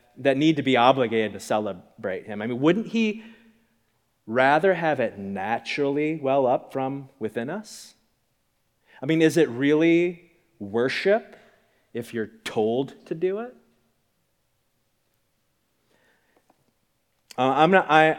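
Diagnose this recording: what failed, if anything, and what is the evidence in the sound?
Nothing failed: no stage of this recording shows a fault in the sound.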